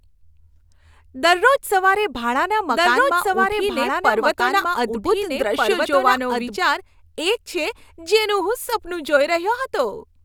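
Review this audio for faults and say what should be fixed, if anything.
From 2.68 to 6.56 s, just after "સવારે ભાડાના", the speech is doubled: a somewhat quieter copy trails roughly a second and a half behind, starting and stopping abruptly. This is likely a second capture path or a misaligned edit. Monitor for duplicate inputs and check edit layers for overlapping copies before export.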